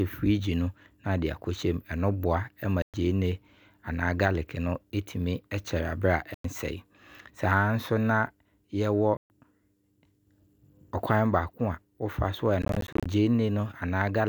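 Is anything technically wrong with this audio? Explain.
Yes. There are four gaps, likely Bluetooth dropouts: audio packets reached the headphones too late and were discarded. Playback fell silent until good packets arrived, then resumed further along, as though the sound had kept running underneath.

The speech cuts out from 2.82 to 2.94 s, just before "gyeene anaa", for about 116 ms. It also cuts out from 6.34 to 6.45 s (about 102 ms) and from 9.17 to 9.30 s (about 131 ms). After each gap the audio resumes with no pause.

From 12.62 to 13.06 s, after "wo fa so a", the dropout breaks into scattered short holes totalling about 189 ms over roughly 435 ms. The longest hole is 29 ms, so the audio sounds choppy rather than briefly muted.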